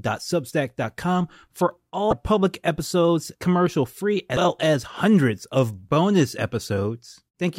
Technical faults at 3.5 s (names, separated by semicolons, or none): none